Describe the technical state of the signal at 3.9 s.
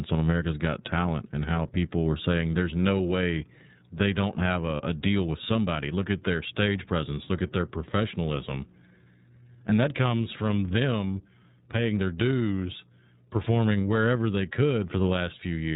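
iLBC codec coding is present at 3.9 s and across the entire clip. Each 30 ms block of excitation is coded independently, which fits iLBC's 13.33 kbps mode, so the speech has nothing above 4 kHz and sounds plainly rough and synthetic.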